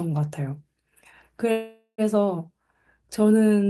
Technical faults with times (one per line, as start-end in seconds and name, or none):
1.51-2.01 call audio freeze